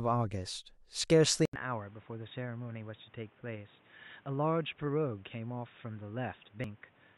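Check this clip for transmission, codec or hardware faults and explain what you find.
Two kinds of fault are present in this speech clip: an input device change and two dropped buffers.

From 1.45 s to the end, the sound turns dull and boxy after a gap of about 80 ms. The level falls by about 10 dB, and a new noise floor sits roughly 30 dB under the speech. This is most likely an input switched to a poorer device, such as a headset in call mode, whose narrower band and different gain reshape the recording.

At 1.56 s and 6.64 s the audio jumps forward with no silence, losing roughly 20 ms and 70 ms respectively. These are likely dropped buffers (overruns): the recording software fell behind, the hardware overwrote unread samples, and the remaining audio was spliced together directly.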